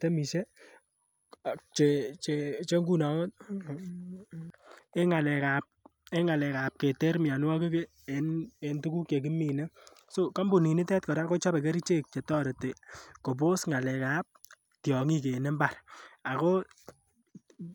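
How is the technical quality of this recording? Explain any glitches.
Listening to the recording, nothing stood out as a technical problem.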